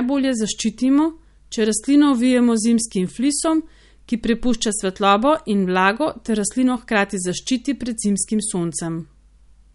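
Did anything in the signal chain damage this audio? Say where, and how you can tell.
Yes. Throughout, the speech sounds watery and swirly with nothing above 11.2 kHz, likely from MP3 compression at the codec stage, which fits a low bitrate near 48 kbps.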